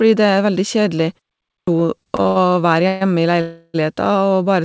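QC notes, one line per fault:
1.55–1.67 s, clipped start after a pause: after a 0.44 s gap, the speech comes in abruptly with its first 124 ms or so missing. The output device seems to have dozed off in the silence and didn't wake up in time to play the onset.
1.80–2.38 s, repeated stalls (stutter): five short hitches, the longest 84 ms, adding up to 176 ms of filler and covering roughly a third of that stretch. Packets kept arriving late, the jitter buffer ran dry each time and the receiver stretched the last sound. Nothing's missing, but it drags and stutters.
2.88–3.03 s and 3.41–3.76 s, call audio freeze: the speech stops and the last sound hangs on as a fading buzz, for 132 ms and then 331 ms, never reaching full silence. It then picks up exactly where it left off, so the delay just grows and nothing's lost. The likely cause is delayed packets draining the jitter buffer.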